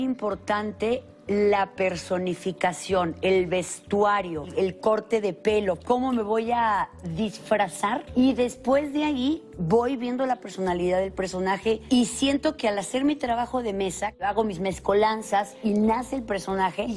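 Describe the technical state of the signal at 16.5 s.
At 16.5 s the signal carries a resampler restarted on every block. The fault runs from 11.3 s to the end of the clip. The conversion from 48 kHz down to 24 kHz is done in separate 100 ms blocks. Each block starts without its neighbours' samples, so every block edge picks up a small error. The result is a regular ticking at 10 Hz, riding on the sound.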